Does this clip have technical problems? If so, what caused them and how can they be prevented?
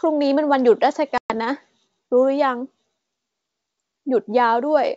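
Yes. Packet loss on an ADPCM call leaves a hard-edged silent gap from 1.18 to 1.32 s. About 120 ms is missing, which fits roughly seven lost packets. The G.722 decoder's predictor and step size then drift from the sender's, so the sound resumes unsettled for a moment. Adding packet loss concealment and a steadier network path prevents this.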